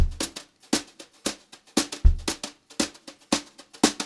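Nothing goes wrong anywhere in this audio, so there's no technical fault to point to at any moment.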